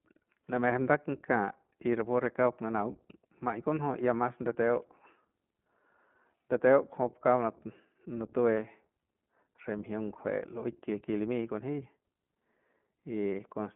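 An iLBC codec runs throughout the speech, with nothing above 3.7 kHz and a line band of roughly 150 Hz to 3.4 kHz. Each short frame is coded on its own, which fits 20 ms frames at about 15 kbps, leaving plainly audible rough, synthetic edges on the speech.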